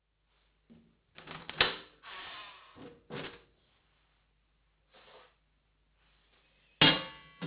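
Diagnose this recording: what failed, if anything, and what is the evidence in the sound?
The failure is in sample-rate conversion: the audio was downsampled without an anti-aliasing filter, to what sounds like about 8 kHz. Throughout, everything above 4 kHz folds back as gritty, metallic aliasing, roughly as loud as the genuine sound, packed hard against the 4 kHz band edge.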